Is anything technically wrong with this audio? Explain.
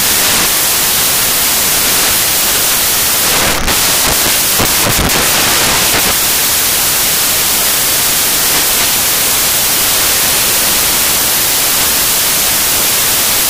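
Yes, the samples are built from the wrong bytes for the whole clip. Each sample's bytes get assembled wrongly, so the jittery low bits end up dominating every value. You hear loud, harsh broadband noise throughout, close to white on loud passages.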